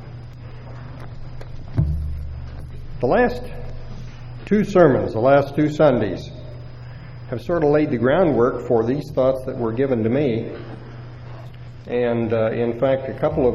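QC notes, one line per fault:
9.87–13.55 s, adaptive stream at a lower bitrate: the quality snaps down with no gap and stays that way to the end, with nothing above about 13.2 kHz and the top end sounding thin and synthetic, plus more codec smearing. That points to the player dropping from a roughly 96 kbit/s AAC-LC rendition to a 16 kbit/s HE-AAC one, where the treble is rebuilt from a few parameters instead of actually encoded.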